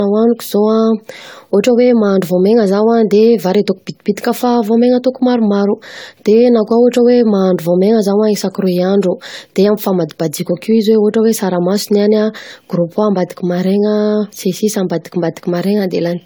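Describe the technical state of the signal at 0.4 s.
At 0.4 s the speech carries a swirly, hollow, smeared quality, with blurred consonant onsets, and this persists through the whole clip. The likely cause is generation loss: the audio seems to have been decoded and re-encoded about seven times, which fits an AAC-LC chain near 96 kbit/s. Each pass lands on a shifted frame grid, so quantisation noise and spectral holes pile up. Unlike a single low-bitrate encode, the band still reaches 20 kHz.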